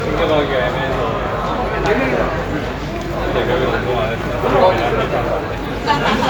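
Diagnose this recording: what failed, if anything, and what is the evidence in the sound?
Codec stage: generation loss throughout, with a swirly, hollow, smeared sound, blurred attacks and nothing above 19.9 kHz, likely from about seven re-encodes through MP3.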